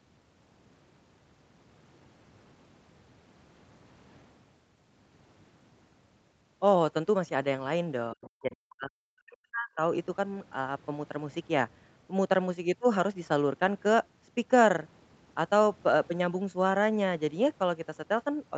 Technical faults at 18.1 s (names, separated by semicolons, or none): none